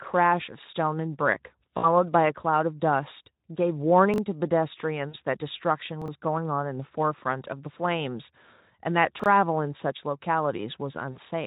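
At 1.77 s, 5.09 s and 11.11 s there is VoIP packet loss concealed by the speech codec. About 60 ms, then 40 ms and 40 ms, of audio is missing, and the decoder fills each gap by stretching the last sound into a fading buzz. Unlike a reordering fault, the sound is truly lost and stays weak briefly afterwards. At 4.14 s, 6.02 s and 9.20 s, chunks out of order make a roughly 21 ms chunk play one or two chunks late. Nothing is missing, but the sound jumps back at hard joins rather than fading.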